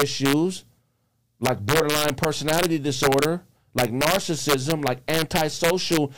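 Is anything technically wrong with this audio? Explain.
Yes. The speech has integer overflow throughout. The signal runs about 2 dB too hot for the integer format. Instead of being held at the limit, each loud peak wraps around to the opposite extreme. The waveform jumps across its full range in a single step. Only a small share of samples goes over, well under one percent. The result is sudden, violent cracks on the loudest moments, far sharper than ordinary clipping.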